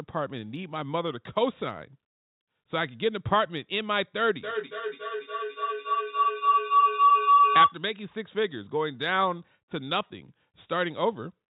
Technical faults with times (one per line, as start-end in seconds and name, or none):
4.36-7.82 feedback howl